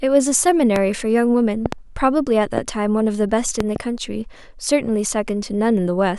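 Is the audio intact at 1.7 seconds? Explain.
No. From 1.66 to 1.75 s a loud pop, two sharp pops in quick succession about 15 dB above the speech, sits over the sound, which continues underneath; likely a sudden voltage pulse from a plug, switch or static.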